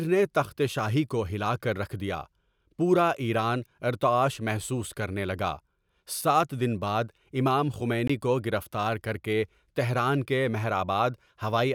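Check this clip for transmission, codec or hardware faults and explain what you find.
One fault stands out in the speech: a block of digital silence from 8.08 to 8.10 s. For 20 ms the sound drops to silence with no fade, which points to an output buffer left unfilled in time. It sounds like a short hole in the audio. The waveform shows a flat silent stretch between two abrupt edges, and the spectrogram shows a blank vertical strip.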